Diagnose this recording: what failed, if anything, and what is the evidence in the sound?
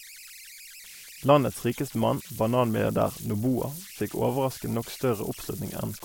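Converter idle tones: undithered delta-sigma bit patterns repeat, whistling around 2 kHz about 18 dB under the speech throughout, a steady horizontal spectrogram line.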